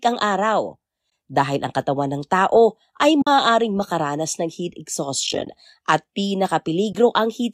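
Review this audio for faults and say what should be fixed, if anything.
AAC frame loss with muting leaves short soft-edged holes at 1.10–1.12 s after "ang araw", at 3.22–3.27 s between "katawan ng tao ay" and "makaranas ng heat", scattered across 5.27–5.47 s after "makaranas ng heat" (about 110 ms missing in runs of roughly 20 ms), and at 6.93–6.95 s. The lost frames are zeroed, and the overlapping windows fade the sound out and back in. That distinguishes them from hard dropouts, and because there is silence rather than repeated sound, they are also distinct from repetition-based concealment. The light graininess underneath is likely from low-delay AAC compression. To prevent the holes, add forward error correction or packet-loss concealment on the transmission path.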